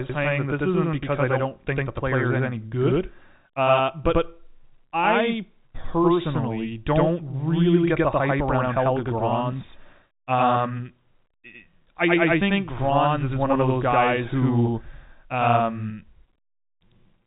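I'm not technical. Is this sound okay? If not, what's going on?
No. Channel delay (doubling) runs throughout: one side arrives about 93 ms late, so when both are combined, every sound gets a second, echo-like copy.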